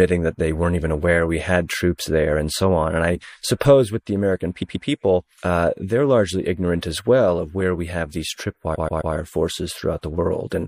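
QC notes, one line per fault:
Throughout, MP3 compression: the speech sounds watery and swirly, with metallic chirps on s sounds and smeared consonant attacks. This most likely comes from a low bitrate around 64 kbps. Unlike a plain low-pass, the missing detail flickers frame to frame rather than simply dulling.
4.61–4.87 s and 8.74–9.13 s, repeated frames: a 0.13 s block of sound plays again, twice in the first spot and three times in the second. This is heard as a mechanical stutter, and it fits a run of about five MP3 frames being written again. Unlike a dropout, nothing goes missing. The same sound returns, lengthening the clip by about 0.26 s and 0.39 s.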